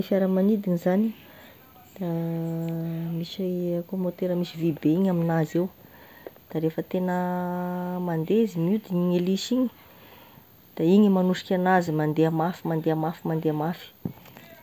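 Listening to this speech recording, nothing stood out as a technical problem at any point.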